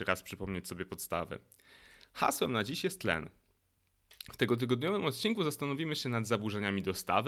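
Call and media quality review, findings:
No faults found in the speech recording. Nothing to escalate for this clip.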